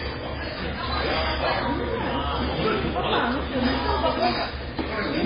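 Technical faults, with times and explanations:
Throughout, MP3 compression: nothing is present above 5 kHz, leaving the audio dull and band-limited, and heavy coding damage gives it a watery, swirling texture with smeared attacks. This is likely a low-bitrate MP3 encode, consistent with roughly 16 kbps. Starved of bits, the encoder cuts the treble at a fixed point and discards weak frequency lines, which flicker on and off between frames and produce the unstable, underwater character.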